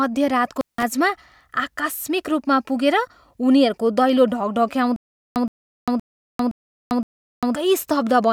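At 0.57 s the speech breaks up with an intermittent contact fault. A loose cable or plug briefly loses its connection. The signal drops out for about 173 ms and returns by 0.83 s. Crackle marks the moment the contact opens and again when it closes. While the line is open, only faint hiss remains. The speech carried during that gap is missing.

From 4.96 s to 7.55 s there is a stutter with silent gaps. A short burst of about 120 ms plays, then about 397 ms of dead digital silence follows. The cycle repeats every 517 ms, five times in all. The even pace gives it a mechanical, looping feel. The likely cause is a stalled player or stream replaying its last fragment at each retry. Whatever should have played in those gaps is lost.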